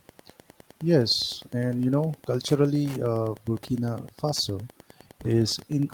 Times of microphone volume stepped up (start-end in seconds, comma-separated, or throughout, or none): none